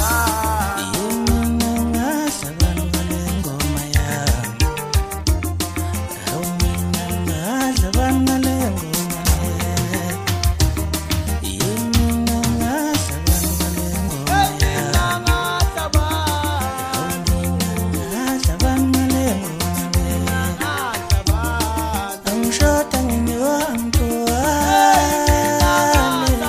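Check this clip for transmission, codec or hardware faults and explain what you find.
Nothing to report: no transmission, codec or hardware faults found anywhere in the clip.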